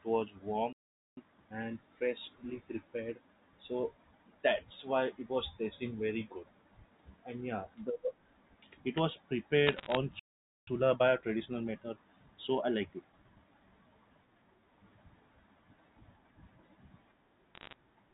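At 0.73 s the player likely ran out of buffered data, causing a playback stall: the speech cuts to silence for about 0.44 s. From 1.17 to 1.61 s, time-compressed catch-up removes the backlog by splicing out small pieces at 2x speed. The speech rushes by at its normal pitch.

Between 9.67 and 9.97 s, bit errors on the digital phone line, at a rate under one percent, corrupt single samples of the G.711 signal. Flips in the sign or high bits produce a burst of sharp ticks and crackle over the speech.

A second playback stall at 10.19 s leaves a gap of about 0.48 s. Catch-up then runs at 1.15x from 10.67 to 13.67 s, a longer and gentler hurry.

Bit errors return from 17.54 to 17.74 s as a shorter crackle of ticks.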